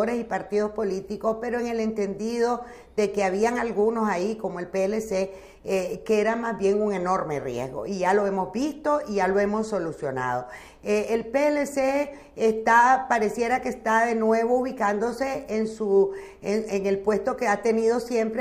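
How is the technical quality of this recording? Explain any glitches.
No glitches or technical faults can be heard anywhere.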